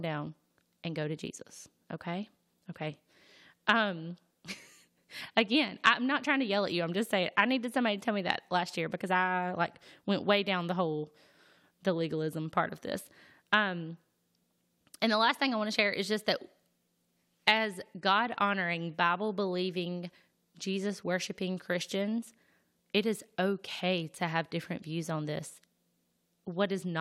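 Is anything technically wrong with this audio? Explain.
No, nothing technically wrong can be heard in this speech recording. There is nothing here that calls for correction.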